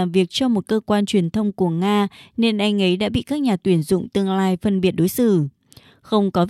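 No technical faults can be heard anywhere in the recording; the speech signal stays steady and intact from its first moment to its last.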